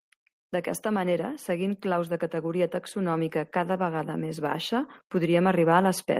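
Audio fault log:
0.82–6.12 s, automatic gain rising: from just after the start the level climbs steadily for over five seconds, finishing about 10 dB louder than it began. The voice and the background noise swell together at the same rate, which marks this as gain applied to the whole signal rather than a change in how loudly anyone speaks. An automatic gain control judged the input too quiet and kept raising its gain slowly until the end of the recording.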